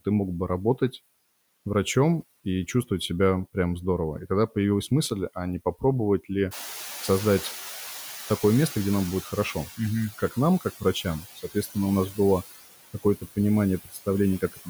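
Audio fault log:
throughout: noise suppressor artifacts. The speech carries noise suppressor artifacts. Bands judged to be steady noise are pulled down by about 14 dB frame by frame, so the background sinks between phrases and swells under them. On a spectrogram the noise floor looks blotchy, patchy and gated.
6.51 to 9.66 s: noise suppressor catching up. Right after "а не попробовать ли" the room noise jumps by about 17 dB, and the suppressor's estimate trails behind it. The louder noise passes with less reduction at first, then fades as the reduction settles to about 10 dB over 3.15 s. A spectrogram shows a bright broadband band that dims gradually.
11.23 to 11.76 s, 13.85 to 14.07 s, 14.41 to 14.68 s: speech cut by the noise suppressor. Parts of the speech were taken for noise and turned down with the background, by about 14 dB in the first two stretches and about 18 dB in the last, covering roughly 100 to 150 ms each. 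The first falls between "нам как" and "у нас". These passages sound swallowed or faint. In the waveform they show as sudden dips in the envelope, and on a spectrogram as gaps where speech energy drops.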